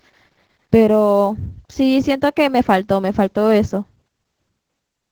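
Opus voice compression in SILK mode runs throughout, sounding muffled and slightly robotic, as at roughly 12 kbps. The spectrogram shows content stopping at 8 kHz, with smeared harmonics.

Sample clock jitter also runs the whole way: samples land a few microseconds off, adding roughness about 35 dB down that rises with loud, bright sounds and vanishes in pauses.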